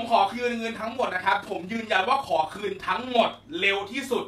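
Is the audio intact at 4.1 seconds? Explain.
Yes, at 4.1 seconds the audio is intact, with no dropout, click, distortion or other break in the signal.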